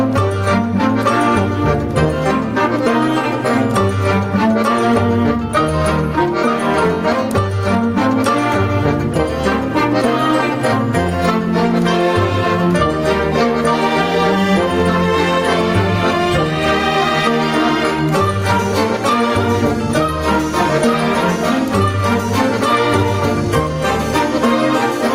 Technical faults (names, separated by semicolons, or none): gain pumping